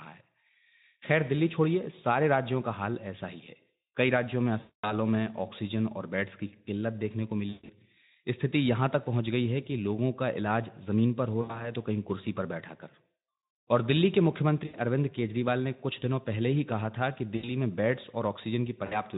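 At 4.59 s, 7.49 s, 11.41 s, 14.65 s, 17.35 s and 18.85 s the sound shows VoIP packet loss concealed by the speech codec, where the light Speex coding can be heard. The longest gap, about 240 ms, comes first. The one at 7.49 s is broken up, with a run of about 140 ms. The rest last 60 to 80 ms. Rather than dropping to silence or clicking, each gap smears into a buzzy tone or coloured noise that fades, and the voice stays weak briefly after packets resume.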